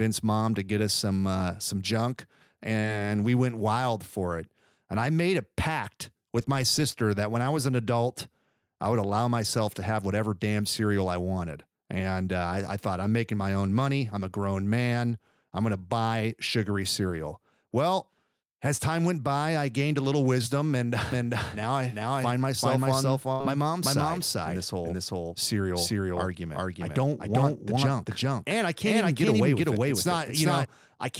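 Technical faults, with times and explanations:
2.79 to 2.85 s and 18.77 to 18.81 s, short concealed packet loss. The first sits between "some uh some junk" and "we went wild for". About 40 ms of audio never arrived in time, and the receiver filled roughly 37 ms of it by extending the last sound, then blended back into the real audio. The second comes just before "time went by I" and is smaller, with about 20 ms lost and 15 ms filled. Each is heard as a brief smear or wobble.
21.12 to 30.65 s, doubled audio track. Starting right after "a little wisdom and", a second full-band copy of the speech runs about four tenths of a second behind the first, at roughly the same level. It carries no reverb tail or room colour, so it sounds like a hard, clean repeat rather than an echo. It cuts in and out abruptly. The likely cause is a second, slower capture path being mixed in with the original.
23.33 to 23.42 s, burst of packet loss. 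This falls inside the doubled stretch. About 80 ms of consecutive audio was lost, and the receiver covered around 70 ms by carrying the last sound forward while fading it down, so the gap comes across as a held, dying tone or hiss. The speech then resumes further on, and the part in between is simply gone.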